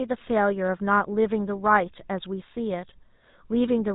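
Speech heard through the GSM full-rate codec for its whole length, with plainly audible codec damage: a buzzy, gravelly roughness from a vocal-tract model driven by coarse pulse excitation, consistent with 13 kbps full-rate coding. A spectrogram shows an abrupt empty ceiling above 3.8 kHz.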